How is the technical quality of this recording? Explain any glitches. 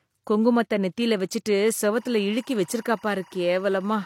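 The recording has one fault. Timecode bleed begins at 1.94 s, just after "குங்குமத்த நெத்தில வெச்சுட்டு", and runs to the end. A 24-frame linear timecode signal has leaked in from a neighbouring track or cable. Its square wave switches between roughly 1 kHz and 2 kHz, giving a steady chirping warble about 30 dB below the speech.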